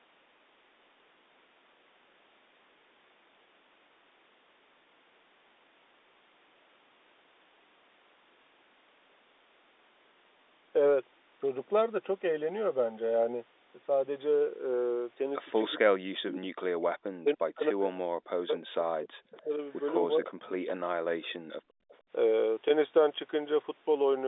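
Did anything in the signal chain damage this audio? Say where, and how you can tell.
Yes. The speech is suppressed in double talk at the call-processing stage. It dips by up to about 40 dB from 15.66 to 16.71 s, 17.23 to 19.6 s and 20.06 to 21.4 s. The likely cause is an echo canceller mistaking its own talker for loudspeaker echo and attenuating both.

There is also echo leak from the same stage. A faint delayed copy of the speech arrives 293 ms late at 19.33 to 19.43 s, about 25 dB under the speech, and again at 21.89 to 21.96 s, about 35 dB under. Residual loudspeaker pickup likely escaped cancellation and was sent back.

The background is gated by the echo canceller. From 21.68 to 21.89 s the room sound drops by about 34 dB for roughly 200 ms, then returns. The canceller clamped the microphone hard while the loudspeaker played, then released it. The surrounding telephone band, roughly 250 Hz to 3.7 kHz, is the G.711 line.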